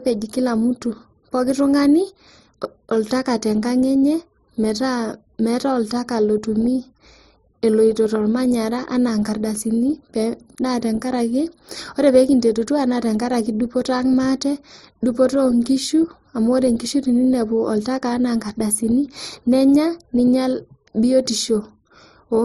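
From start to finish the speech carries channel delay with comb filtering. One channel trails the other by roughly 0.2 ms, and when the two are summed to mono the shared content cancels at evenly spaced frequencies, with the first notch at about 3 kHz and further notches spaced evenly above it. Because the notches sit right in the presence region, the speech sounds hollow and phasey, and the coloration stays fixed for the whole clip.

Also present throughout is a layered set of compression artefacts, with no content above 18.8 kHz. This is likely transcoding between lossy codecs, an MP3 encode at 40 kbit/s followed by Opus at 48 kbit/s. Opus had to spend its bits on the MP3 damage it inherited and then added its own artefacts, so both sets of artefacts can be heard together.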